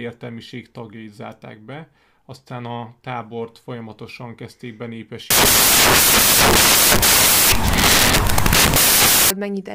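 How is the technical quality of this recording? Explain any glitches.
The recording has one real problem: a stretch where the audio turns into noise. Right after "a tábort folyamatosan kezdték", from about 5.30 s to 9.30 s, there are four seconds of samples built from the wrong bytes. The reader assembles each sample's bytes incorrectly, whether it's off by a byte, has them in swapped order or assumes the wrong alignment. The quick-changing low bits end up as the big part of every value, so the speech is replaced by loud, broadband noise.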